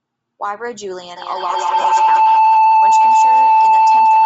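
Bluetooth LC3 compression runs through the whole of this speech recording: the upper spectrum sounds thinned and replaced by grainy, breathy noise, giving the voice a rough edge. This is likely from LC3 coding at a low rate, consistent with about 32 kbps and 7.5 ms frames. A feedback howl starts at 1.17 s and lasts to the end. A loop between two devices on the same call feeds the sound back with gain on each pass, so the repeats grow rather than fade and narrow to a tone around 1 kHz, pulsing roughly every fifth of a second and peaking about 12 dB above the speech. Lost LE Audio frames break the sound from 1.81 to 1.85 s, a gap of 30 ms. The decoder conceals the loss by reusing the last spectrum with scrambled phase, so the audio briefly turns into a noisy smear. The length points to about four consecutive frames going missing over the link.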